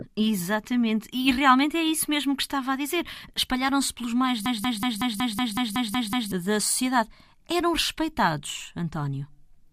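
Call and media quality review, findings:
System hang loop, 4.46 to 6.32 s. Machine-gun stutter: one 186 ms fragment repeats ten times at 5.38 Hz. Driver froze, ring buffer kept cycling. Fits an 8192-sample buffer. About two seconds lost.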